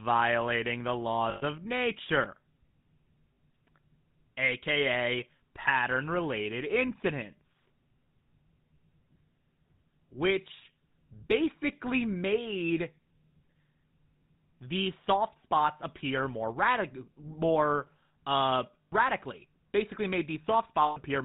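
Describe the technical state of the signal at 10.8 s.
At 10.8 s, as throughout, the speech shows plain GSM full-rate codec damage: pulse-excited vocal-tract modelling adds gravelly buzz beyond simple band-limiting, with nothing above 4 kHz.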